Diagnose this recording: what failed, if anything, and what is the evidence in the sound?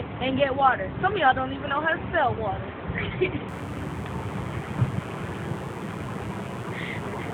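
Mains buzz comes in at 3.48 s and runs to the end: a steady, raspy buzz sitting roughly 25 dB under the sound. It's an analogue wiring problem. Sharp spikes twice per 60 Hz cycle, probably from a dimmer or poor shielding, spray harmonics up into the kilohertz range.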